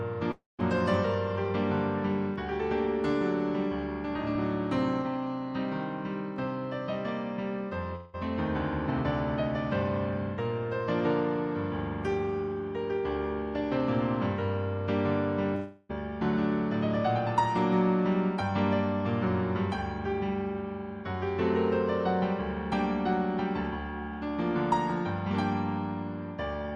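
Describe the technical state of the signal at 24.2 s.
At 24.2 s the signal is intact, with no audible dropout, distortion, glitch or other fault.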